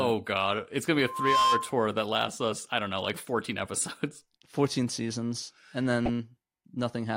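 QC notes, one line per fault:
0.995–1.75 s: loudspeaker feedback squeal, a 1 kHz tone swelling over roughly 0.4 s to about 5 dB above the speech, as microphone–speaker loop gain exceeds unity, ending before "that lasts us I".
6.05–6.09 s: corrupt frame decoded, a brief glitch peaking around -15 dBFS across a few frames, where damaged bits were decoded and placed energy at wrong frequencies.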